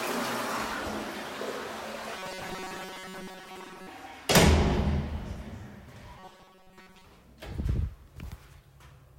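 Audio likely arrived too seldom, so roughly 5.3 ms buffers were repeated, giving robotic sound from 2.17 to 3.87 s and 6.19 to 7.04 s: a rigid 188 Hz metallic buzz.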